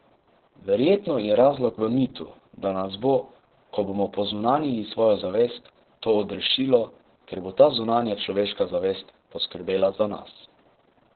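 Opus voice compression runs throughout the speech. Little is heard above 4.4 kHz, so the speech sounds muffled and hoarse. Coarse SILK coding adds a robotic edge, which fits a bitrate near 6 kbps.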